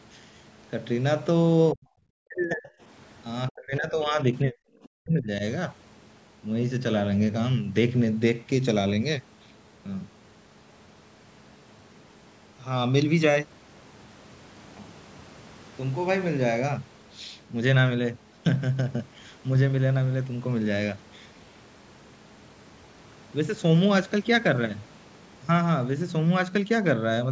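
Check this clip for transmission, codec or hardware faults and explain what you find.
One fault turns up here, five times: speech suppressed in double talk, at 1.73–1.86, 2.15–2.7, 3.5–4.19, 4.44–4.55 and 5.02–5.43 s. The voice chops out in holes up to roughly 40 dB deep, likely an echo canceller unable to separate the near-end talker from overlapping far-end echo and ducking both.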